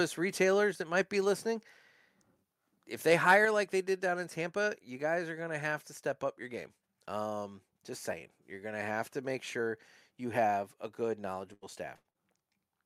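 Speech, with three faults. From 3.12 to 3.34 s the loudest syllables turn harsh and crackly. The tops of the waveform are flattened. The peaks run about 4 dB past the converter's limit, with around one percent of samples clipped. That points to microphone overload, likely from an input volume set too high for the converter. The distortion is brief.

At 3.45 s the level of both the speech and the background drops suddenly, by about 4 dB. It happens in one step, just after the distorted peak. This is a microphone volume stepped down. The call software likely reacts to the clipping and lowers the device's input volume at once. Everything after this point sits quieter.

From 11.11 to 12.17 s the sound turns choppy. This is repeated packet loss, heard as robotic sound. Four gaps fall close together. The longest is 85 ms. Each hole is patched by stretching the sound just before it, 222 ms in all, about a fifth of the span. 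Around 150 ms is rebuilt.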